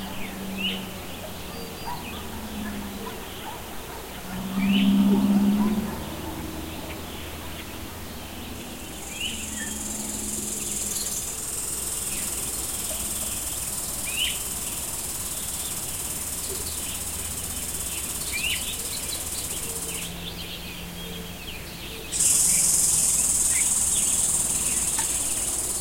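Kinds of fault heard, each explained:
Nothing in the way of technical faults turns up here; the sound simply runs along without any glitches, dropouts or processing trouble to point at.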